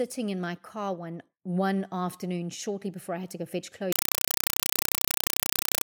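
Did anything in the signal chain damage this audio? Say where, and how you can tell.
Yes. At the playback stage, from 3.92 s to the end, the speech gives way to very loud chattering static, which is a compressed stream played as audio. It comes as 4 ms noise bursts 31.25 times a second with silent padding between them, which fits undecoded AC-3 frames. Broadband noise or dropouts wouldn't have that fixed, regular cadence.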